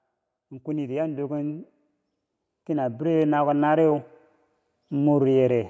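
Speech that has passed through call microphone processing, with nothing above 8 kHz on a spectrogram, shows automatic gain rising twice: from 0.62 to 1.75 s and from 2.66 to 3.98 s. Each time the gain control judged the input too quiet and lifted its level by about 6 dB over roughly a second, so voice and background swell together. On a waveform the envelope visibly widens along that ramp; a spectrogram shows every band brightening in step.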